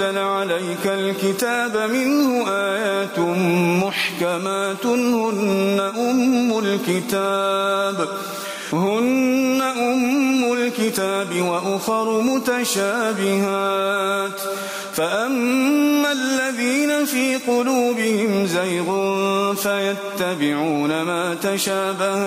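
Gain pumping runs through the whole clip: the gain ducks by roughly 10 dB under each loud sound, squashing the dynamics. The likely cause is input gain set far too high, with a fast limiter clamping down. Unlike a noise gate, the background is never cut off.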